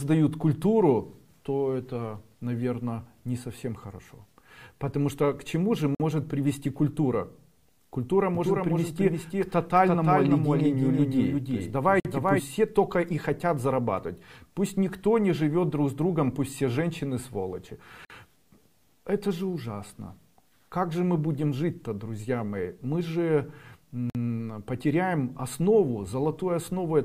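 Audio delivered in six-second chunks leaves a gap between chunks at 5.95 s: a 50 ms hole cuts into the sound, though nothing is lost. From 8.35 s to 12.40 s, a second copy, likely captured again by a slower path, produces a doubled audio track. A full-band duplicate about 5 dB quieter trails roughly 0.3 s behind, without decay or room colour, and it starts and stops abruptly. The same 50 ms gaps recur at 12.00 s, 18.05 s and 24.10 s, one at each six-second join.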